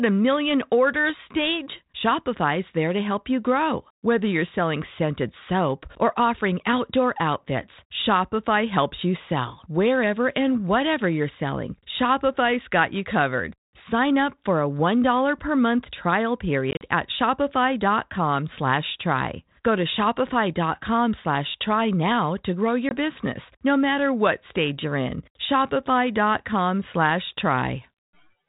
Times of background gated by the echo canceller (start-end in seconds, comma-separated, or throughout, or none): none